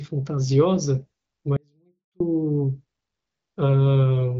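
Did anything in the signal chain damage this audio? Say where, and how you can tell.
Yes. An audio dropout to a faint residue runs from 1.57 to 2.20 s: the speech cuts off abruptly for about 0.64 s, leaving only faint sound about 35 dB down, then returns mid-flow. The likely cause is a break in the wanted signal, with the path after the break staying live.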